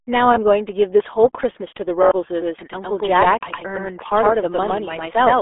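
Throughout the speech, a RealAudio 14.4 codec squeezes everything into a narrow 300 Hz to 3.5 kHz band with nothing above 3.8 kHz, pointing to 8 kbit/s, leaving it muffled and gargly.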